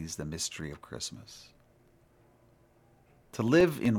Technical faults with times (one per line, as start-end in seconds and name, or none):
0.48-3.85 periodic USB or driver dropouts